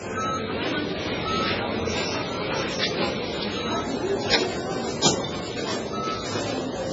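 Throughout the clip, heavy MP3 compression at a very low bitrate, which fits roughly 16 kbps, is the likely cause: the encoder removed everything above 7.6 kHz and dropped weak frequency lines frame by frame, leaving the sound dull, watery and swirling, with smeared attacks.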